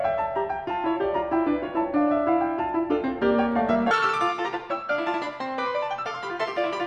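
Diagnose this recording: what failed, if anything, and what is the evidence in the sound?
The fault is in sample-format conversion: the audio is read two samples at a time, so it plays at double speed. From 3.91 s to the end, the music suddenly runs twice as fast and jumps up an octave, 12 semitones. The reader is treating each pair of samples as a single frame, as if the data had two channels or samples twice as wide.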